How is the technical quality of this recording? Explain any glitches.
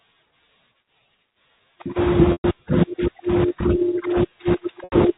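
The speech has two brief dropouts from packet loss with pitch repetition. At 2.32 to 2.44 s and 4.84 to 4.92 s, a buzzy held tone fades out where 120 ms and 80 ms of audio went missing. The receiver looped the last pitch period to cover each gap. The narrow telephone band of G.711 coding is audible throughout.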